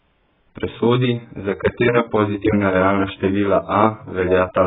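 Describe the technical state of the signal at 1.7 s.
At 1.7 s, as throughout, the speech is cut off above 3.8 kHz and sounds smeared and warbling, likely AAC compression at a very low bitrate, near 8 kbps. The warble separates it from a plain low-pass filter.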